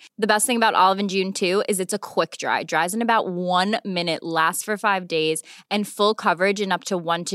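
Listening to this speech recording, nothing technically amiss stood out at any point.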